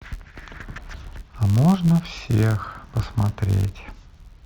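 Filter restarted on every block, present from start to finish: a filter in the chain drops its internal state at each block boundary and begins again from silence, so every block opens with a small transient. These ticks repeat at 86.1 Hz, which fits a 512-sample buffer, and blur into a low buzz riding under the speech, rising and falling with the speech's loudness.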